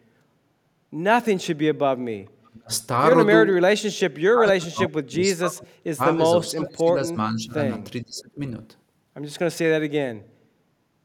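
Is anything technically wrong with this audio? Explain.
Yes, there are two problems, both pointing at the echo canceller on a speakerphone call.

Echo leak, 2.45 to 2.5 s: a very faint, brief copy of the speech slips through, trailing the original by about 460 ms. It's likely the far end's canceller not fully removing what its microphone caught from the loudspeaker.

Speech suppressed in double talk, at 2.5 to 2.71 s, 3.69 to 6.02 s, 6.36 to 7.6 s and 8.03 to 8.4 s: the speech sinks sharply and breaks up, dropping by about 40 dB at its worst. The likely cause is the canceller mistaking overlapping talk for echo and clamping everything.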